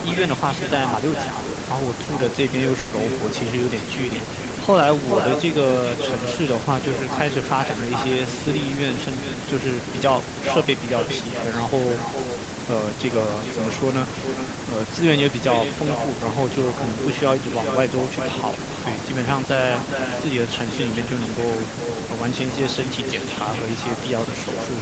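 Right from the start, the speech carries an echo with no canceller. The far end is evidently playing the call out of a loudspeaker, its microphone picks that back up, and nothing strips it out, so every phrase returns after roughly 400 ms, about 7 dB down. It sounds like a thinner shadow trailing the talker the whole way through.

Then at 2.79 s there's a burst of packet loss lasting until 2.93 s. About 120 ms of audio never arrived in time, so the receiver stretched out the last bit of sound it had and let it fade, which you hear as a brief held buzz or dying hiss. When the speech picks up again, that 120 ms has simply been skipped. The top end stopping around 8 kHz is just the call path's bandwidth and isn't part of the fault.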